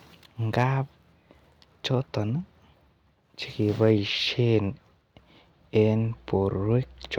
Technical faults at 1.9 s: none

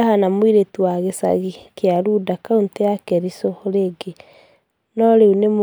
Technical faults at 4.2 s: none

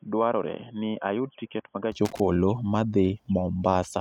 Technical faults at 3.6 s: none

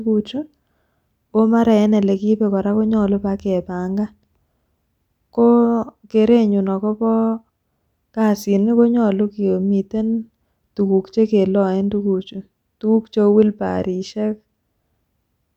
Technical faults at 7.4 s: none

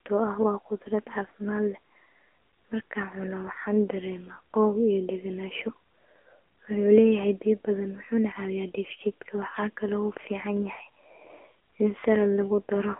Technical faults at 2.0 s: AMR narrowband mobile codec

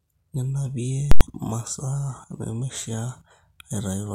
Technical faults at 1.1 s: invalid numbers at full scale

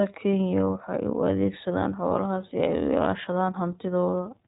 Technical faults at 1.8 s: iLBC codec

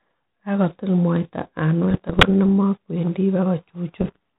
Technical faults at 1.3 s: none

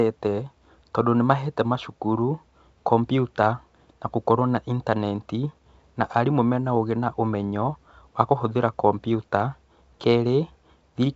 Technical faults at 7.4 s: none

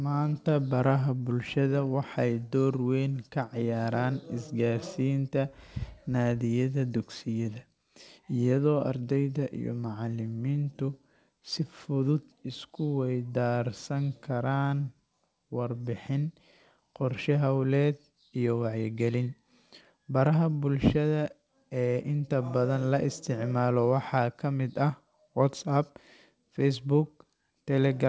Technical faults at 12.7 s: none

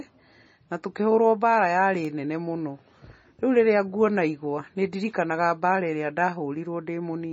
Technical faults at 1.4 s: MP3 compression

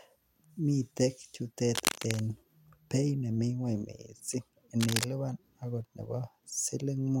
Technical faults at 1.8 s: cable scratch noise

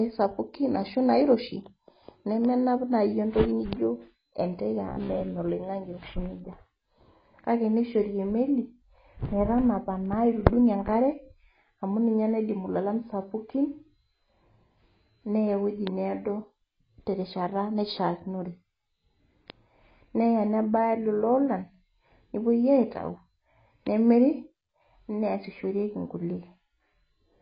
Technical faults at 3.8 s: AAC compression

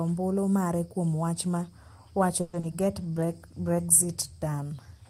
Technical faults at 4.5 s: call bitrate drop

